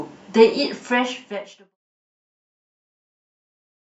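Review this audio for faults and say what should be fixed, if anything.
Nothing here needs fixing; the speech just eases out in a smooth fade that starts around half a second in and has finished by 1.77 s, shaped the way an editor would do it, with no click or hard edge.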